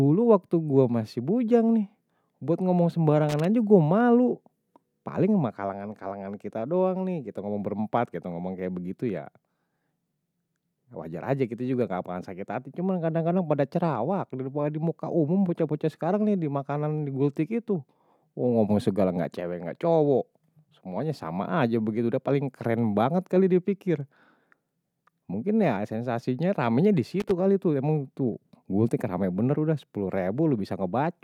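At 3.29 to 3.45 s, loose connector crackle breaks into the speech. A worn contact is making and breaking. The signal chops in and out as an irregular scratchy burst. It returns at 27.20 to 27.31 s, just before "kali tuh emang tuh".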